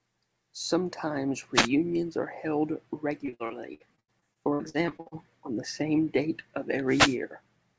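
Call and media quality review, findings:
Wireless microphone noise hit at 1.54–1.69 s and 6.88–7.17 s, the first just before "are held", the second after "the same date of". These are brief static swishes. Cause is RF fading at the analogue FM receiver, where reflections cancel the carrier and receiver noise surges.

Repeated packet loss (robotic sound) from 3.26 to 5.13 s, between "are held" and "on the same date". The speech is choppy, with pieces missing. About 30% of the stretch is concealed, with the longest hole 83 ms. The jitter buffer keeps filling holes by extending the last audio. Band-limiting to 8 kHz fits the G.722 call codec.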